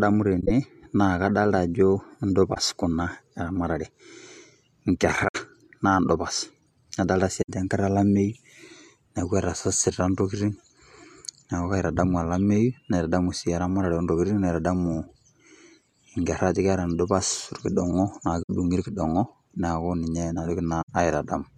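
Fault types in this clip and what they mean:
Corrupt frame concealed: at 0.40, 2.54, 5.28, 7.41, 18.42 and 20.81 s, the decoder detected damaged AAC frames and filled them in itself, covering 0.05 to 0.11 s of the speech.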